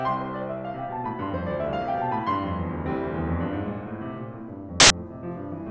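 At 4.80 s the music is cut by a burst of very loud white noise lasting about 0.1 s, ending at 4.90 s, with hard edges at both ends. This is file tags played as audio: the player has read an embedded cover picture as if it were sample data. Because the picture is compressed, its bytes are close to random, so they decode as flat broadband static at a very loud level rather than as any tonal or rasping sound.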